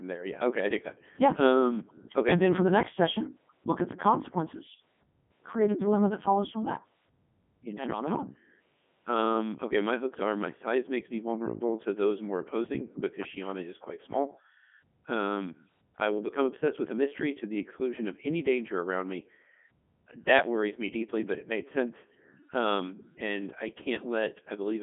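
Throughout, the speech has passed through the Codec 2 vocoder, at a heaviness which fits its top 3.2 kbit/s mode. Only pitch, voicing, energy and a spectral envelope survive, rebuilt from sine waves, so the voice sounds robotic and buzzy, confined to 150 Hz to 3.5 kHz, with nothing above 3.8 kHz.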